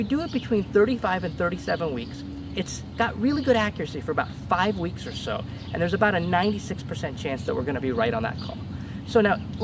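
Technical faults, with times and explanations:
No technical faults are audible; the call microphone processing leaves nothing above 8 kHz and trims the lowest bass, as expected for that path.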